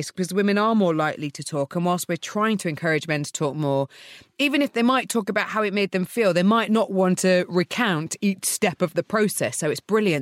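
No technical faults can be heard anywhere in the speech recording.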